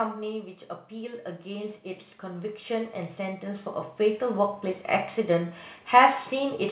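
From 0.89 to 4.77 s there's automatic gain rising: the gain control decided the input was too quiet and slowly pushed it up about 13 dB, so the voice and background swell together over the narrowband call audio, with nothing above 4 kHz.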